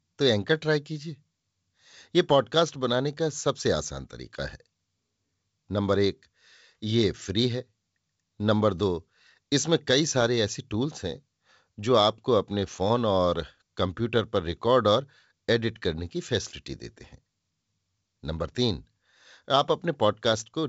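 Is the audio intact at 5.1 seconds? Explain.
Yes, the audio is intact at 5.1 seconds, with the speech carried cleanly through G.722 wideband telephone coding at 64 kbit/s and nothing above about 7.7 kHz, as that coding leaves it.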